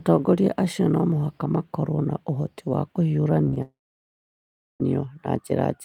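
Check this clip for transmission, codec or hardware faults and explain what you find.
Two transmission faults appear, both just past the midpoint of this speech clip.

Short concealed packet loss, at 3.45–3.49 s, 3.49–3.54 s and 3.54–3.58 s: three runs of packets, missing about 20 ms, 40 ms and 20 ms, arrived too late for the decoder. The receiver bridged each gap by extending the preceding sound and then blending back into real audio. Back to back, they make the speech smear and wobble briefly for roughly a tenth of a second, and a short consonant there can drop out.

Long network dropout, from 3.62 to 4.82 s: a stretch of roughly 1.2 s of audio went missing, most likely because the network stopped delivering packets altogether. Concealment carries the last sound forward as a short, fading tail, then gives way to about 1.07 s of silence. Speech resumes at 4.82 s with the missing portion simply gone.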